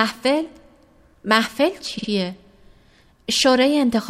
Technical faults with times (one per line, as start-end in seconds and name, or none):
1.97-2.08 repeated frames